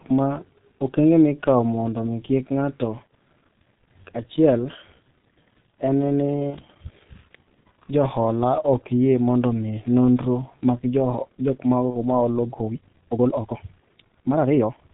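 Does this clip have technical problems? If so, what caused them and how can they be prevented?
Yes. The whole clip runs through the G.723.1 codec at about 6.3 kbit/s, heavily damaged. Nothing gets through above 4 kHz, and its slow voice model leaves the speech muffled and hoarse with smeared consonants. Use a wideband codec at a higher bitrate instead.

From 12.58 s to the end there's a time-stretched section. The pace suddenly jumps to roughly 1.95 times faster while the pitch holds steady, and it sounds rushed. That's likely software squeezing the audio to fit a length by dropping short chunks. Trim or edit the content rather than compressing the timing.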